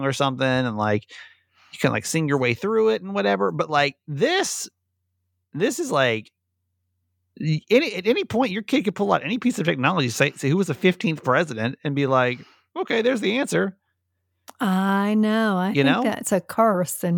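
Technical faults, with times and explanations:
No technical faults detected.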